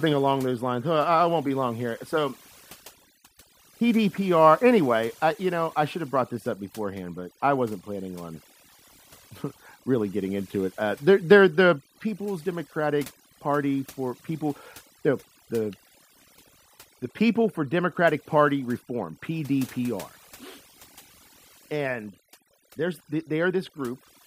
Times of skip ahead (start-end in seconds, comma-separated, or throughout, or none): none